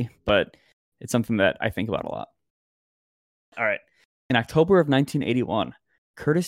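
No technical faults are audible.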